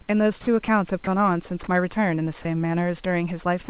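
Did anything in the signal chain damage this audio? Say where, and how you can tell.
Yes. At the call-processing stage, the sender's voice detector likely mistook parts of the speech for background and stopped sending, so the sound was dropped and comfort noise filled in. Speech briefly gives way to steady noise at 0.41–0.47 s, 0.65–0.68 s, 1.04–1.07 s and 2.42–2.45 s.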